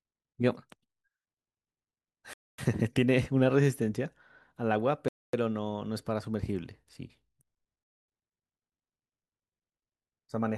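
At 2.33 and again at 5.08 s the speech drops into a hard-edged 250 ms silence, a gap between chunks: it's being delivered in 2.5 s pieces with dead air at each join.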